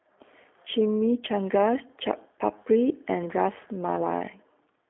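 Throughout, the speech shows G.729 codec damage. Rebuilt from a vocal tract model and sparse pulses, it sounds rough and synthetic. Nothing passes above 3.7 kHz.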